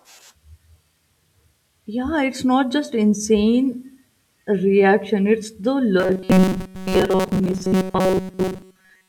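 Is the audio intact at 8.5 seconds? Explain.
No. From 6.00 s, right after "reaction it's the", to 9.08 s, there's robotic sound from repeated short buffers, likely a roughly 5 ms chunk replayed while new audio arrives late. Most of the real sound is lost under a rigid, metallic 188 Hz buzz.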